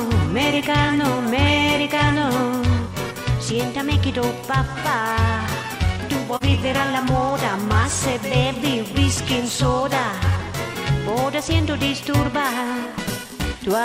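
At 6.37 to 6.43 s, AAC frame loss with muting leaves a brief dip of about 43 ms, consistent with one zeroed frame faded by overlapping windows.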